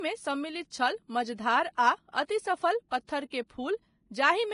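Throughout the speech, nothing is heard above about 10.6 kHz, and the remaining treble is grainy and hissy rather than merely dull. That points to heavy Vorbis compression, likely at a low bitrate around 29 kbps. Fine detail is quantised into noise, unlike a plain low-pass filter.

At 1.74 to 1.78 s (39 ms), 2.89 to 2.92 s (34 ms) and 3.30 to 3.32 s (21 ms), a brief hiss arrives just ahead of sharp attacks, which then sound smeared. This is pre-echo: block-spread quantisation noise leaking before the transient. An echo would instead appear after the attack.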